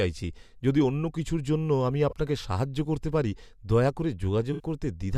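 At 2.09–2.13 s, after "অন্য কিছুর জন্য আমি", and 4.53–4.64 s, after "করতে পারি দয়া করে", a corrupt frame was concealed: the decoder replaced damaged AAC data, consistent with two and three lost frames.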